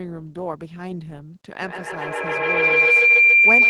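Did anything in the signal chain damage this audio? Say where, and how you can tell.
Yes. The damage is a feedback howl, formed in the acoustic loop of the call path: loudspeaker to room to microphone and back into the call. From 1.62 s a tone near 2 kHz rises and holds to the end of the clip. It peaks about 14 dB above the speech. It pulses roughly every 150 ms, matching the loop's round-trip delay. Each pass adds gain, so the repeats grow and narrow onto the frequency the loop favours.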